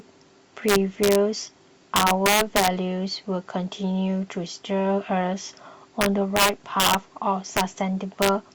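Integer overflow hits this speech at 0.69 to 1.15 s, 1.96 to 2.68 s, 6.01 to 6.95 s, 7.57 to 7.61 s and 8.22 to 8.29 s. Peaks driven about 1 to 6 dB past the integer limit wrap to the opposite sign instead of clamping, producing harsh, violent cracks.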